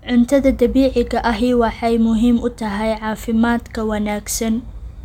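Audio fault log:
No faults detected in this speech recording.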